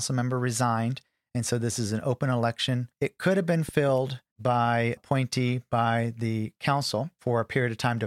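A speech clip with a loud pop between 3.69 and 3.91 s: two sharp thumps in quick succession, standing a few decibels above the voice, which carries on underneath. The likely cause is a sudden voltage pulse, from a connector, switch, static discharge or driver glitch, entering the signal path.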